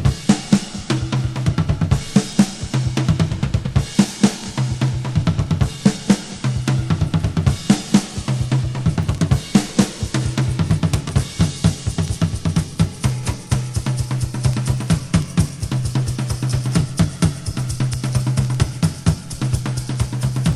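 Word clock ticks run from 0.41 s to 20.53 s, about once a second: an unlocked digital receiver drifting roughly 20 ppm slips one sample each time, leaving sharp clicks.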